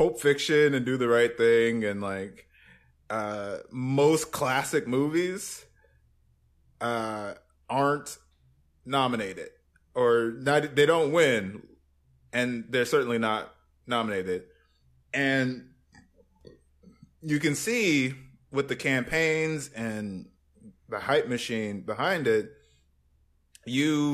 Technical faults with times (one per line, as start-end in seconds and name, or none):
none